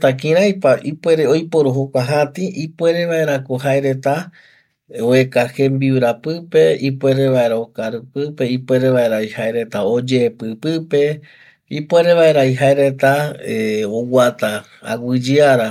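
Speech recording with no audible technical faults.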